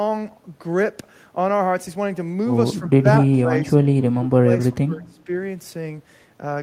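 Between 2.8 and 5.3 s the speech keeps getting pushed down in short bursts, at 2.8–3.06 s, 3.42–3.67 s, 4.09–4.5 s and 4.72–5.29 s. The level sags by roughly 15, 10, 20 and then 25 dB. That's likely speech suppressed in double talk: the echo canceller couldn't tell this talker apart from the far end's echo and clamped down on both together.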